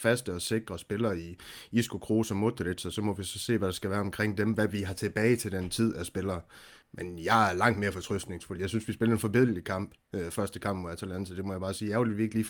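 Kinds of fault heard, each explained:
No kinds of fault are heard in this speech clip.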